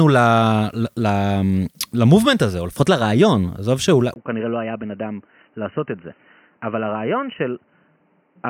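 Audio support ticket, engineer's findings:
Speech turns dull and boxy from 4.14 s to end of clip. Brief 20 ms dropout at the transition, then nothing above 3 kHz. Level drops by about 10 dB. New background noise sits roughly 35 dB under the speech. Likely cause: input switched to a poorer device mid-recording, such as a fallback mic or a headset call profile. Its narrower passband, lower gain and own noise floor replace the original path.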